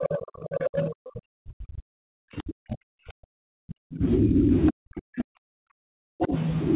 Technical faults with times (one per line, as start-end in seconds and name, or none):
0.00-6.34 speech suppressed in double talk
0.03-0.18 other side's voice leaking through
0.46-0.90 other side's voice leaking through
4.66-4.72 other side's voice leaking through
6.22-6.35 other side's voice leaking through